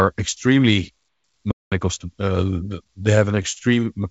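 A playback stall runs from 1.51 to 1.72 s. The speech stops mid-flow for about 200 ms of silence, then resumes. The likely cause is the player running short of data or having its output thread blocked, so nothing reached the output until it caught up.

Repeated stalls (stutter) follow between 2.84 and 3.59 s. Here packets arrived late or unevenly, and the jitter buffer drained six times. At each gap the receiver stretched the last bit of sound, padding about 94 ms in total, with the longest fill at 41 ms and roughly an eighth of that stretch concealed. No speech is missing, but the passage drags and catches. Throughout, the call path's G.722 coding leaves nothing above 8 kHz.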